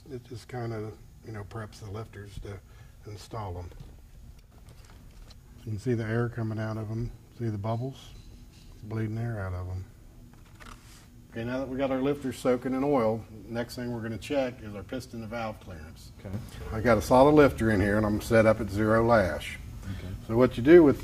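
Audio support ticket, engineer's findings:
Sudden gain jump, 4.39–4.52 s: digital gain likely switched without a ramp, dropping level by about 6 dB for roughly 130 ms, then restoring. Sound and noise floor dip together, abrupt step at both edges. Sudden gain jump, 16.34 s to end: same likely unramped gain change, about +6 dB, held to clip end. Sound and noise floor step up together and stay raised.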